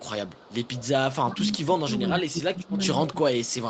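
From 0.00 to 1.62 s a faint, delayed copy of the speech trails the original by about 0.4 s, sitting around 20 dB below it. This is an echo leak, likely from a far-end loudspeaker whose echo canceller let part of the returning sound through.

From 1.22 s to the end, the talker's level sinks and dips unevenly, falling by as much as about 20 dB. This is speech suppressed in double talk, likely because the echo canceller, unable to separate the talker from the overlapping echo, turned both down.

Within that stretch the echo leak returns, quietly at 2.29 to 2.73 s, around 25 dB down, and more strongly at 3.06 to 3.12 s, around 15 dB down, each time with the same 405 ms delay.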